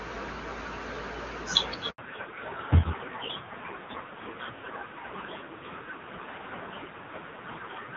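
Speech over a phone call, with a handover gap at 1.90 s. The waveform drops flat for 80 ms, until 1.98 s, leaving a blank vertical strip on the spectrogram while the call switched networks. From 1.98 s to the end comes a fallback to narrowband. The spectrogram's energy stops sharply at 4 kHz, and the audio turns dull and raspy. This fits a drop from HD Voice at about 23.85 kbit/s to narrowband AMR near 5.9 kbit/s.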